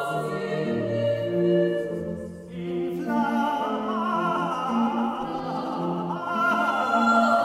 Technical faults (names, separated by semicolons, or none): doubled audio track